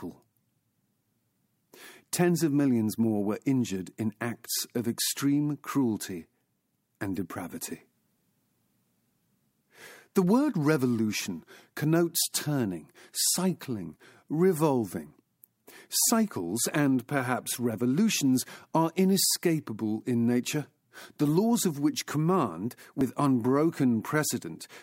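At 23.01 s, just after "laws of which command", the speech jumps forward, losing about 50 ms of audio with no gap of silence. This is likely a dropped buffer (overrun): samples were overwritten before being read, and the surrounding audio was spliced directly together.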